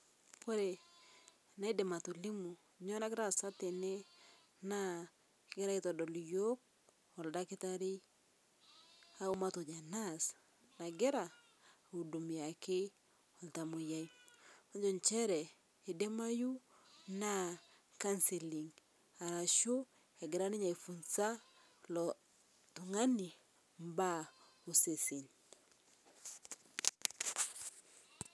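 No technical faults are audible.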